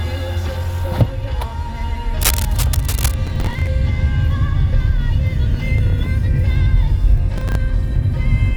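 From 2.21 to 3.14 s a rough scratching rustle sits about 10 dB under the sound, cable scratch noise, likely a worn connector or lead shifting its contact. At 3.27 to 3.67 s and again at 7.34 to 7.55 s, gritty tearing crackle is processor overload crackle. Repeated missed deadlines replay stale audio in fragments that suggest buffers of roughly 10 ms.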